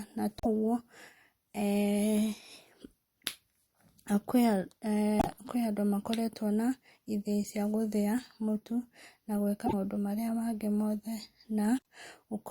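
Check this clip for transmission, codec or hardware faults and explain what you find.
There are four short glitches in this speech, at 0.38–0.46 s, 5.19–5.27 s, 9.65–9.74 s and 11.77–11.82 s. Each sounds like a skip into a brief chirp, burst of noise or short gap. The likely cause is a broken MP3 bit reservoir: after missing frames, the next 26.1 ms frames fetch borrowed bytes that now belong elsewhere.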